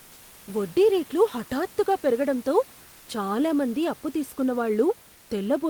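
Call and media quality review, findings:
Comfort noise in place of the background, 2.83–3.07 s, after "వడ్డీ రేట్లు హఠాత్తుగా పెరుగడంతో": room tone goes flat and featureless, about 1 dB quieter. Likely sender DTX, receiver filling the gap.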